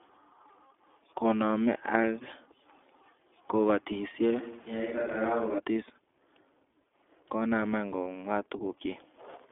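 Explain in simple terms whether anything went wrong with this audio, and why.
Yes, a few things went wrong. The whole recording went through the iLBC codec, a phone-style voice codec, so it sounds thin, slightly rough and robotic, with nothing above about 3.4 kHz.

There are two lost iLBC frames, one at 2.02 s and one at 8.04 s, each about 20 ms long. The decoder papers over each gap with a brief buzzy hum, then recovers straight away.

From 4.41 s to 5.57 s the voice suddenly turns hollow and roomy, a bit quieter and hissier, then snaps back. That's likely a switch to a distant microphone.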